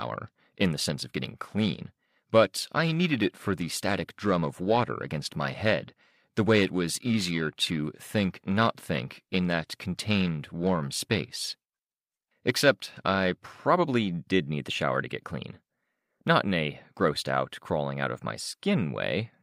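A speech recording with periodic clock jitter from the start to 13.6 s, ending just before "did need the shower". Interference is modulating the converter's sampling clock at around 1 kHz, giving the voice a rough, metallic edge that disappears in pauses. On a spectrogram, copies of each harmonic appear about 1 kHz above and below it, growing stronger toward the upper frequencies; the waveform itself looks essentially unchanged.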